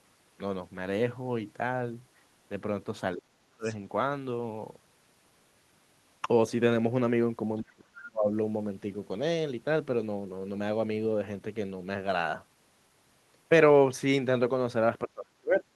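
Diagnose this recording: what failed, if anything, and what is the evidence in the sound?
Speech suppressed in double talk, likely a call-processing failure: the speech sinks steeply between 3.15 and 3.65 s, 7.62 and 8.29 s, and 15.05 and 15.65 s, by up to about 40 dB, then returns. Unlike a network dropout, the level is pulled down rather than cut to hard silence.

The other side's voice leaking through, also call processing: from 3.63 to 3.76 s a faint second voice, about 20 dB below the talker, appears as the first suppression lifts. This is likely residual loudspeaker echo the canceller failed to remove. Wiring crosstalk would persist instead of surfacing briefly.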